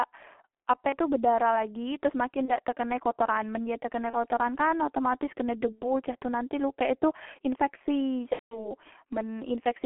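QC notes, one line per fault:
throughout: G.723.1 codec. Speech sits in a narrow line band of 300 Hz to 3.4 kHz and sounds muffled and hoarse. Consonants are smeared. The heavy damage fits a very low bitrate near 6 kbit/s, where a slow-updating voice model loses detail.
0.89–0.95 s (before "bedarah lagi teros"), 2.45–2.51 s (before "dak tekene kotoran men"), 4.10–4.16 s, 5.72–5.82 s (between "kan otomatis kene" and "cak tu nanti lukek"), 8.33–8.69 s: VoIP packet loss concealed by the speech codec. The decoder fills each gap by repeating its last pitch and filter at falling gain. The result is a brief buzzy or noisy smear. The short gaps fit one lost 30 ms frame. The 5.72 s gap fits about two lost frames. The 8.33 s gap is longest and goes silent from its third lost frame, which fits about six lost frames. Speech stays weak briefly after each gap.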